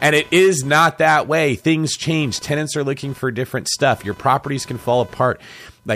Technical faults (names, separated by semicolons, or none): computer activity noise